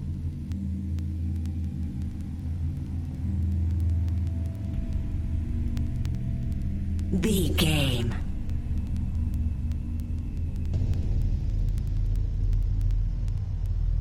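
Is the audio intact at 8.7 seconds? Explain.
No. Word clock ticks run from 0.14 s to 13.94 s, so 8.7 s falls inside them. The receiving device is running on its own clock rather than locking to the sender's, and the two drift apart by around 200 parts per million. Each time they slip past each other, one sample is dropped or repeated. The result is a steady train of sharp ticks, roughly one every tenth of a second, audible right through that moment.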